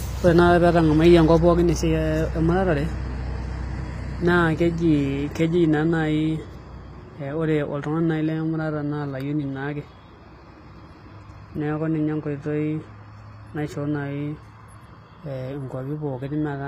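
The treble was likely rebuilt by HE-AAC compression from copied lower bands at a low bitrate, leaving s sounds gritty and metallic throughout, with nothing above 15.4 kHz.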